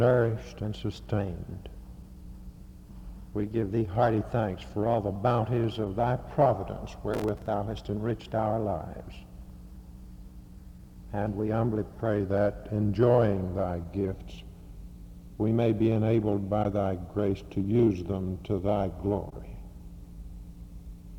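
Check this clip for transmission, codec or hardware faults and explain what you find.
One fault stands out, a short burst of processor overload crackle.

Processor overload crackle, from 7.14 to 7.48 s: the processing could not keep up with its small audio buffers and missed deadlines again and again over this stretch. Each missed slot was filled with stale audio, cut in with hard edges. The pattern fits buffers of a few milliseconds failing about 20 times. It sounds like a gritty, tearing crackle laid over the sound that stops once the load clears.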